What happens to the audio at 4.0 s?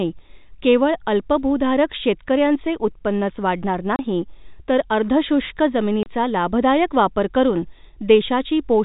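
A 30 ms gap from packet loss filled with silence hits the speech at 3.96–3.99 s, which fits one dropped packet. It shows as a flat-line hole with hard edges.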